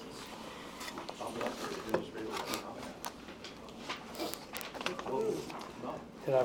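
From 0.14 s to the end, word clock ticks recur roughly every 50 ms, around 150 in all. The receiver is unlocked from the sender's clock, drifting by something like 500 ppm, so each slip drops or repeats a single sample, heard as a sharp click.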